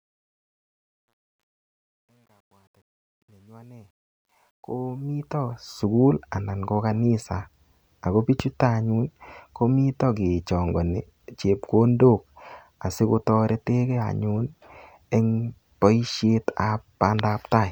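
A fade-in stage running from 0.0 s to 5.84 s keeps too few bits and adds no dither, coarse enough to suggest roughly 11-bit resolution. The result is truncation distortion on the fade. Until about 4.39 s the quiet sound turns gritty, before clearing just ahead of "anan ko kanisa".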